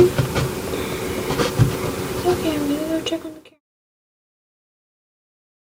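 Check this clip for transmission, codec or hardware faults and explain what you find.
Nothing here points to a transmission, codec or hardware problem, and the only thing worth a mention is a gentle editor-style fade-out that begins somewhere around two and a half seconds and has dropped away by 3.61 s, with no click or hard edge.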